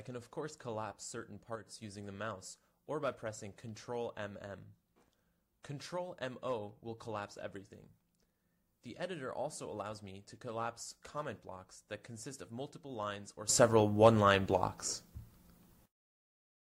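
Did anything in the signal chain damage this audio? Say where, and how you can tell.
Yes. A sudden gain jump at 1.56 s drops the level by about 6 dB until 1.67 s, and another at 13.49 s raises it by about 16 dB to the end. Sound and background noise step together instantly, likely from a digital gain change in call processing applied without a ramp.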